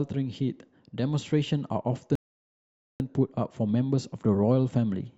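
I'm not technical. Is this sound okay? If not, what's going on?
No. At 2.15 seconds the speech stops dead for about 0.85 seconds, then picks up exactly where it left off. That's a rebuffering stall: playback ran out of audio.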